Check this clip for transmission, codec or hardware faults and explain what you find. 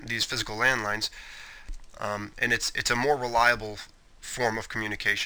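There's one fault, running through the whole clip: crude rate conversion. Samples seem to have been simply dropped to change rate, which fits a 48 kHz to 44.1 kHz change with no filtering. That leaves an inharmonic, gritty fizz, only about 20 dB under the sound, riding on loud and bright moments.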